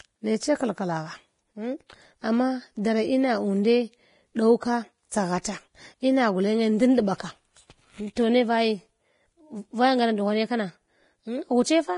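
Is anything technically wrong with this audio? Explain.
Yes. Heavy Vorbis compression runs through the whole speech clip. Nothing is present above 10.6 kHz. The treble is rendered as grainy hiss, tones sound rough, and attacks are blurred. That points to a likely low-rate encode, around 30 kbps, where residue above the spectral floor is coarsely quantised.

Pre-echo occurs at 5.09 to 5.11 s, just after "ɗow ka", then at 5.42 to 5.45 s, and at 8.16 s, just before "toh ne". Each sharp onset is preceded by a brief hiss lasting 21, 28 and 13 ms. The codec spreads quantisation noise, sized for the loud attack, across the whole transform block, so it leaks into the quiet moment before the onset and softens it.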